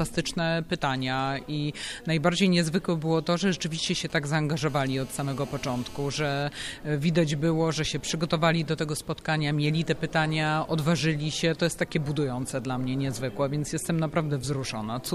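From 3.87 to 4.59 s, GSM signalling bursts break in. A 2G handset close by is sending short groups of radio pulses, the kind it emits while setting up a call or text. The audio circuitry rectifies them into sound. The result is a galloping dit-dit-dit of brief buzzes. Each buzz repeats at about 217 Hz, matching the handset's burst rate. The pattern sits roughly 25 dB below the main sound.

At 4.69 s, a GSM phone buzz takes over and runs until 6.43 s. Now the handset is transmitting in a steady train of bursts, as in an active call. Its bursts arrive 216.7 times a second. The circuitry rectifies each one. This gives a hard, raspy buzz at that rate, rich in harmonics. It has no relation to the wanted sound. It is nearly steady. Its level is about 23 dB below the signal.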